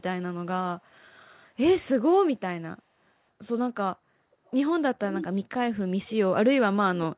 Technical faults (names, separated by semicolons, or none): echo leak